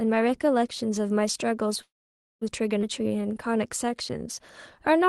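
At 1.81 s the speech trails off into a fading buzz or hiss and stays mostly silent until 2.43 s. About 0.54 s of that is near-silence, then it picks up right where it left off. That's a call audio freeze, likely packets stalling in transit until the jitter buffer emptied, so a gap got inserted rather than anything lost.

Right after, at 2.81 to 2.84 s, there's a skip ahead. Playback jumps forward with barely any gap, and roughly a fifth of a second of speech is just gone, the two sides butted together. That's a stretch of audio dropped on the way or by the jitter buffer overflowing.

From 2.99 s to 5.08 s the jitter buffer slow-down kicks in. Speech plays at about 92% speed, same pitch, with drawn-out sounds as repeated pitch periods pad in 170 ms to rebuild the reserve. All of this rides on the Opus call path, with its top end capped around 12 kHz.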